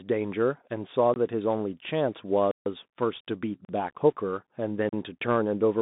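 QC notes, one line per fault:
throughout: Bluetooth CVSD headset codec. The speech passes through a one-bit, 64 kHz delta coder whose adaptive step lags fast, loud high-frequency movement, so sibilants turn scratchy over a granular hiss. The spectrogram shows energy confined to about 150 Hz–3.7 kHz, with nothing above 3.8 kHz.
1.14–1.16, 2.51–2.66, 3.65–3.69, 4.89–4.93: block of digital silence. The output drops to silence for 21, 148, 40 and 40 ms, cutting in and out without fades. The waveform shows flat-line gaps, and the spectrogram shows blank vertical bands.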